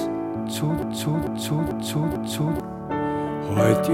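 At 0.82 s the audio locks into a broken-record loop. A fragment of about 0.44 s plays four times back to back until 2.60 s, and whatever should have sounded in that span is gone. The likely cause is a stalled player, encoder or stream that kept resending the last chunk it held. On a waveform the same envelope shape stamps out identically four times. On a spectrogram the pattern tiles in exact, evenly spaced copies.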